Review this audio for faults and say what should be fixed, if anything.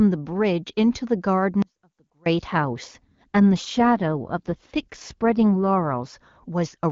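An audio dropout to a faint residue runs from 1.62 to 2.26 s, about 0.64 s. The speech cuts out abruptly, leaving only a faint trace roughly 35 dB down, most likely from a short loss of the stream while the downstream path stayed live. Preventing it means adding jitter buffering and packet-loss concealment on the transport so brief losses are bridged rather than passed through as gaps.

An AMR rate drop follows from 2.47 to 6.18 s. The bandwidth holds and nothing goes silent, but the speech turns rougher and more synthetic. That roughness fits the AMR-WB encoder stepping down from 23.85 kbit/s to 8.85 kbit/s. At 23.85 kbit/s the codec leaves only faint damage. Improving radio coverage or link margin keeps the network from forcing the lower codec mode.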